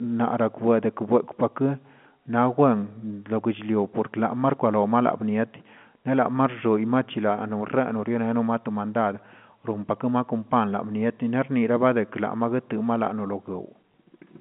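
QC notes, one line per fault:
13.92 s: packet loss with last packet repeated. About 20 ms of sound went missing, which fits a single lost 20 ms packet. The receiver filled the gap by playing the previous packet again. That single repeat sounds like a small blip. The repeat is too short to build into a buzz. The G.711 telephone band, 150 Hz to 3.4 kHz, is audible around it.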